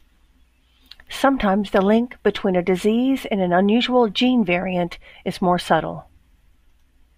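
No technical fault can be heard anywhere in the speech recording, and the signal stays steady and continuous throughout.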